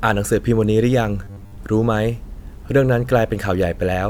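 A speech clip in which, from 1.24 to 1.58 s, the voice turns into a rigid, metallic buzz at 100 Hz that only loosely tracks the speech. This is robotic sound from repeated short buffers, likely caused by audio arriving too seldom, so a 10 ms chunk is looped for most of that stretch while the real audio is skipped.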